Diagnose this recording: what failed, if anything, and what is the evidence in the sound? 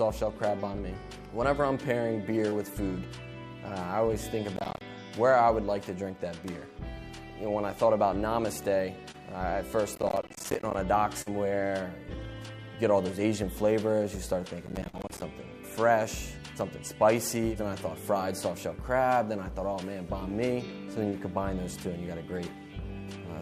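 Network stage, short concealed packet loss: brief smears at 2.49, 9.11, 14.89 and 21.09 s, each 20 to 40 ms long. Packets arrived too late for the decoder, which extrapolated the preceding sound to bridge each hole before blending back into real audio.

Driver or buffer stage, processor overload crackle: gritty tearing from 4.56 to 4.81 s, 9.95 to 10.74 s and 14.63 to 15.22 s. The processor repeatedly missed deadlines on small buffers, around 10 ms each, leaving roughly 15 to 40 hard-edged silent gaps in each stretch.

Network stage, burst of packet loss: at 11.22 to 11.29 s a fading, held continuation of the preceding sound lasts about 45 ms. Consecutive packets were lost, the receiver concealed the gap while attenuating, and playback resumed with roughly 10 ms of audio skipped.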